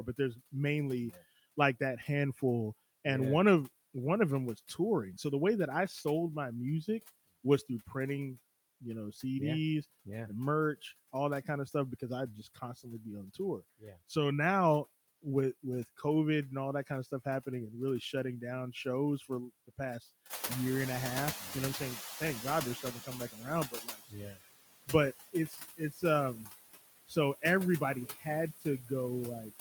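Noise suppressor artifacts run through the whole clip. The suppressor pulls the background down by about 17 dB, deciding frame by frame which frequency bands hold steady noise. Because those decisions shift constantly, the noise floor dips in the gaps between words and swells back up beneath them.

Speech cut by the noise suppressor appears from 0.06 to 14.11 s and again from 15.22 to 20.04 s. In these stretches the suppressor mistakes parts of the speech for noise. Soft consonants and word endings get turned down along with the background, by up to about 16 dB in the first stretch and about 15 dB in the second. The affected moments add up to around a second in the first stretch and under half a second in the second. They sound swallowed or faint.

Noise suppressor catching up follows from 20.29 to 23.34 s. Around 20.5 s the room noise jumps by about 15 dB and afterwards sits only about 11 dB below the speech. 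The suppressor's noise estimate trails behind this sudden change. At first the louder background comes through with less reduction, then it sinks gradually over about 3 s as the estimate adapts, ending with roughly 12 dB of reduction.

Speech cut by the noise suppressor returns from 21.4 s onward. It removes speech detail more aggressively, with drops of up to about 20 dB, the deepest in the clip. Faint consonants and quieter syllables fade out with the background, so parts of the speech sound swallowed or faint.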